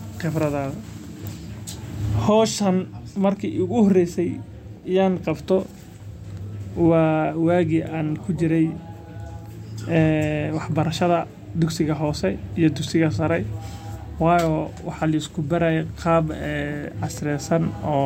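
No audible faults anywhere in the speech; nothing to flag.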